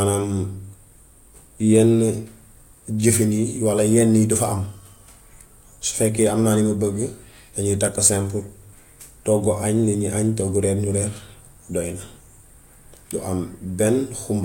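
Nothing in this bit of speech stands out as a technical fault at any point, so there's really nothing to flag here.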